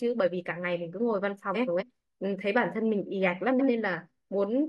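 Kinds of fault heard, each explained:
Frames out of order: two adjacent runs of frames are decoded in swapped order, so a stretch plays with its halves exchanged. At 1.54–1.83 s (two 128 ms blocks) and 3.51–3.69 s (two 85.3 ms blocks) this produces garbled flutter, with no time lost.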